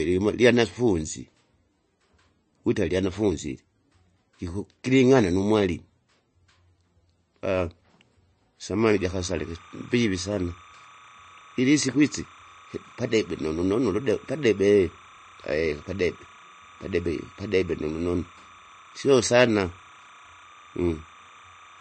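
Throughout the speech there is plainly audible watery, swirling coloration with nothing above 8.3 kHz, likely from MP3 compression at a low bitrate, around 31 kbps. Starved of bits, the encoder drops weak frequency lines frame to frame and cuts the treble outright.

From 8.98 s to the end, timecode bleed adds a steady chirping warble roughly 25 dB below the speech. Linear timecode running at 29.97 frames per second is leaking in, its square wave flipping between tones near 1 kHz and 2 kHz.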